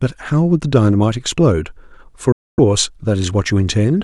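At 2.32 s the speech drops to silence for 255 ms, then resumes mid-stream: likely a Bluetooth dropout, with packets arriving too late.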